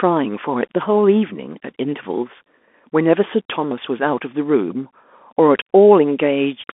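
Throughout the speech, a Bluetooth CVSD headset codec squeezes the signal into a one-bit, step-adapting stream. The band runs from about 250 Hz to 3.5 kHz, s sounds turn scratchy over a granular hiss, and a spectrogram shows a flat ceiling with nothing above 3.8 kHz.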